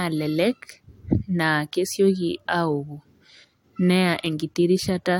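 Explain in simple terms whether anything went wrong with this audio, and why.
Nothing went wrong with this speech recording. There is no moment in it that stands out as a technical problem.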